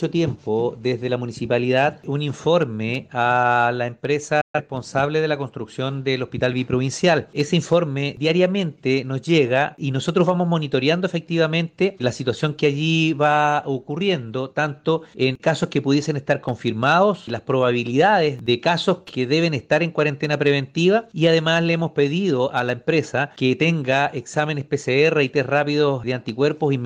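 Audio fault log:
4.41–4.60 s, digital broadcast dropout: the audio fades out in about 8 ms and the gap runs to 4.60 s, where sound returns mid-programme with nothing replayed. The receiver stopped getting decodable frames, either because the signal was lost or because frames failed their checksum, and it muted until valid data arrived. Roughly 128 ms of programme is missing, which fits three lost frames. The short fade avoids a click, leaving a clean hole.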